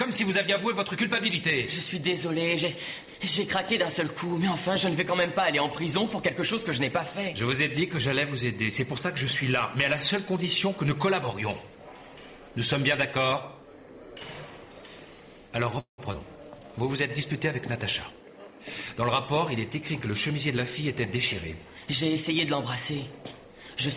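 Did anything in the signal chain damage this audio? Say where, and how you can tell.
Yes, in the network and jitter-buffer stage of the call path. From 15.8 to 16.0 s the sound trails into a fading fill and then about 110 ms of silence before resuming. This is a call audio freeze, likely from delayed packets draining the jitter buffer, which added 181 ms of delay.

Short concealed packet loss at 16.12 to 16.15 s: about 40 ms of audio never arrived, and a 13 ms synthesized patch bridges it, heard as a brief smear.

Jitter buffer slow-down at 16.50 to 16.69 s: repeated pitch periods add 35 ms. The sound runs at 85% speed, drawn out at unchanged pitch.

Jitter buffer speed-up from 18.1 to 19.71 s: trimmed pitch periods remove roughly 150 ms. The sound runs at 109% speed, hurried but at the same pitch. Throughout, the G.711 A-law path leaves nothing above 4 kHz.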